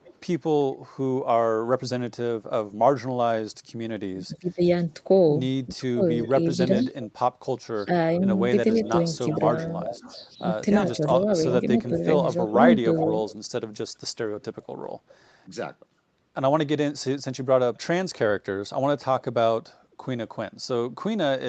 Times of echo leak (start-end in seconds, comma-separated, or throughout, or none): 0.00-0.20, 6.16-7.10, 8.72-13.34, 14.41-15.17